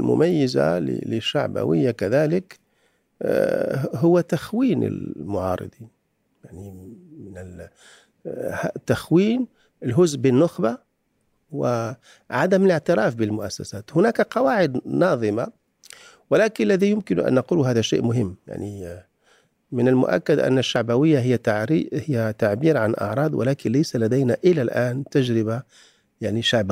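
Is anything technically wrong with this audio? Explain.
Yes, there's one glitch in this speech clip. At about 20.76 s you get a small jump in the sound, like a sliver of the audio just vanished and the two sides got stitched together with no gap. That's most likely a dropped buffer (overrun): the recording software didn't pull its samples off the hardware in time, the buffer got overwritten, and roughly 20 ms of audio was lost outright rather than replaced by silence.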